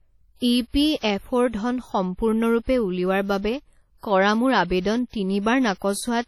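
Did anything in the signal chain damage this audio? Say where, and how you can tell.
Yes, the damage sits at the codec stage and runs through the whole speech clip: a ringing, washy texture with hiss that swells and fades with the speech, heavy enough to point to a bitrate around 32 kbps, with the likely cause WMA compression. Long transform blocks smear quantisation noise across tens of milliseconds around each sound, and weak components are zeroed. A spectrogram shows blotchy, holed time-frequency patches, pre-echo smudges before onsets, and nothing above 17.7 kHz.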